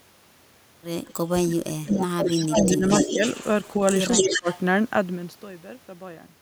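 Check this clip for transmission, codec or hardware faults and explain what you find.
Two faults turn up here, both pointing at the far end's echo canceller on a speakerphone call.

Echo leak shows up at 1.07–1.13 s, 1.91–1.98 s, 2.27–3.84 s and 4.11–4.6 s. A delayed copy of the speech comes back about 213 to 225 ms late. It starts as faint scraps, around 35 dB down, and builds until the last stretch sits roughly level with the speech itself. That's likely a canceller failing to remove its own loudspeaker output from the mic.

Speech suppressed in double talk hits at 1.37–2.86 s, 3.12–3.23 s and 4.17–4.48 s, while both sides are talking at once. The talker's level sinks, by roughly 30 dB in the long first stretch, only a few dB in the brief second one and about 15 dB in the third. That's likely the canceller mistaking real speech for echo and clamping down on everything.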